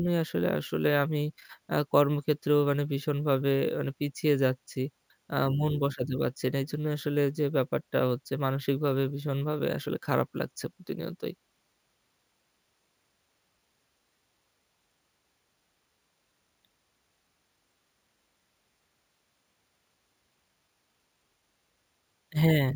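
Speech, throughout affected by imaging from sample-and-hold upsampling: each sample was simply repeated with no smoothing filter, which fits a 16 kHz source raised to 48 kHz. Mirrored spectrum copies fill 8 kHz to 16 kHz at about 24 dB below the speech, heard as a bright metallic fizz tracking the speech level.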